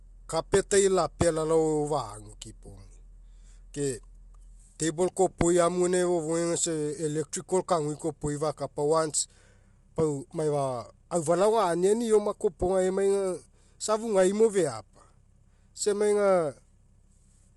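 Throughout the speech there is a rough, grainy texture, with noise filling the spaces between the pitch harmonics and nothing at all above 11.6 kHz. The likely cause is low-delay AAC compression (AAC-ELD). Its short frames resolve harmonics poorly, and the damage is plainly audible at a rate that fits about 32 kbps. What separates it from a plain bandwidth limit is that the graininess sits inside the harmonic structure, not just at the missing top.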